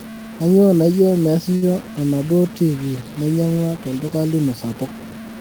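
From the start, the speech is grainy, with a harsh distortion that rises and falls with the signal. Quiet stretches sputter or drop out. The likely cause is low bit depth without dither, around 5 bits, truncated, leaving error only about 20 dB below the speech.

Between 1.55 and 1.75 s, a short stall from a late packet occurs. A packet arrived late and the jitter buffer ran dry. The last sound was stretched by 66 ms to fill the gap. Nothing is lost, but a sound hangs briefly with a slight buzz or dip.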